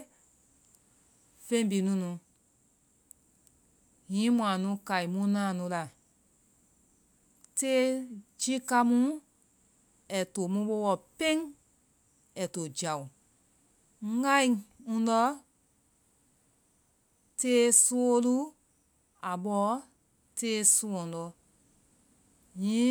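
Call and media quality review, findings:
No faults found in recording.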